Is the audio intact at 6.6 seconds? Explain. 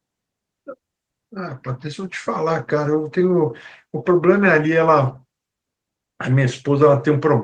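Yes, at 6.6 seconds the speech is intact, with no dropout, click or other fault at that moment.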